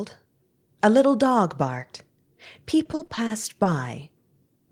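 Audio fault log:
2.83–3.68 s, repeated packet loss (robotic sound): audio packets kept arriving late or not at all, and each hole was filled by stretching the preceding sound, with gaps up to 40 ms and roughly a quarter of the span concealed. The speech turns choppy, with pieces missing.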